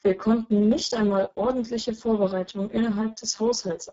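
From start to end, the speech has passed through the Speex codec at a very low quality setting, likely near 6 kbps, starving the excitation of bits. Speech comes out noisy, hoarse and rough, with nothing above 7.8 kHz.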